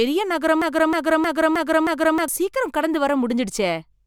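From 0.62 to 2.28 s the speech falls into a broken-record loop. A 0.31 s fragment repeats identically five times, back to back, without the fading of an echo. A stalled player or stream likely kept resending its last fragment, losing the intended audio.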